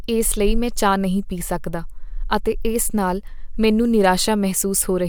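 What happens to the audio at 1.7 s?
Nothing goes wrong at 1.7 s; the speech passes through that moment intact, with no dropout, click, distortion or other fault.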